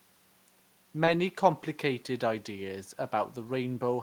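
At 1.05 s, a short concealed packet loss: about 20 ms of speech never arrived, and the receiver extended the preceding sound for 18 ms, leaving a brief smear instead of real content. At 1.07 s and again at 1.61 s, a lost packet was rebuilt from error correction: each 20 ms stretch plays from a low-bitrate copy carried in the next packet, so the speech continues but sounds rougher and noisier rather than smeared.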